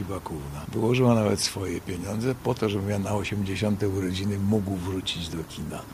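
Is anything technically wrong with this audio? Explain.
No, nothing technically wrong can be heard in this audio. The sound holds steady throughout, with nothing that points to a fault anywhere in the chain.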